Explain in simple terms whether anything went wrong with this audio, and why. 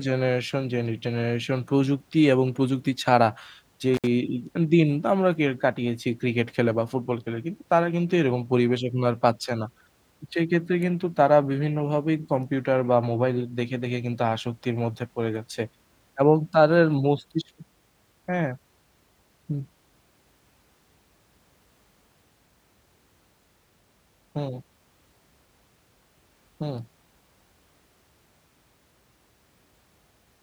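At about 3.94 seconds the speech briefly drops out, with a crackle where it cuts off and again where it returns at 4.07 s. That is an intermittent contact: a loose cable or plug lost its connection for roughly 67 milliseconds.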